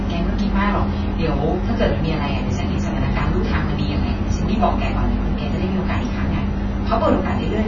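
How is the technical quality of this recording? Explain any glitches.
The recording sounds dull and smeared throughout, with nothing above about 7 kHz and a warbly, fizzy texture on sustained vowels and sibilants. That pattern points to heavy AAC compression, likely AAC-LC at a low bitrate, which fits about 16 kbps. At that rate the encoder has too few bits for the speech spectrum. It drops everything above the cut-off, leaves holes in the bands it keeps, and coarsely quantises the rest.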